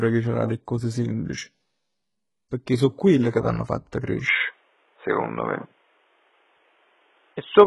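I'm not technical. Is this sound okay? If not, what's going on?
No. Throughout the speech, the hiss of s sounds is gritty and lispy, and the brightness above it sounds synthetic, with nothing above 11.5 kHz. This is likely HE-AAC compression, which rebuilds the treble from lower sounds. Unlike simple muffling, the treble is still there, just not real.

At 4.28 s, right after "quelle che t'hann fatto", the sound abruptly turns dull and boxy until the end. Nothing above 3.8 kHz remains and the loudness shifts. The likely cause is the input switching to a poorer device. It stands apart from the compression because it starts at one instant, with no gap, and stays changed.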